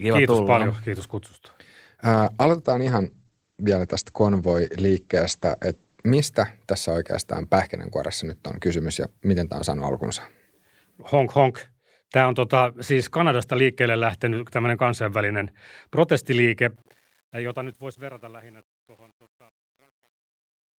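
From 2.13 to 6.11 s, a call bitrate drop muffles the speech. The top end stops at 8 kHz, fitting an encoder cut from 32 to 12 kbps.

From 16.76 s, the fade out around 17 s shows truncation distortion. Too few bits, likely about 9, leave gritty steps, worst from 17.54 s.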